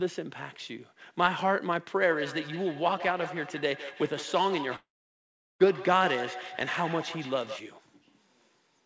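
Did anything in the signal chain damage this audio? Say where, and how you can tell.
Yes. From 1.98 s to 7.76 s there is a feedback echo between two devices, a call-processing loop: each syllable returns about every 150 ms, thinner and more ringing, peaking about 12 dB below the direct speech. Room reverberation would smear smoothly rather than repeat at a fixed interval.

A long network dropout, likely packet loss, runs from 4.76 s to 5.62 s. The last sound continues as a fading buzz, then about 0.75 s of silence follows, and speech resumes with roughly 0.84 s missing. That distinguishes it from a mute or a level drop.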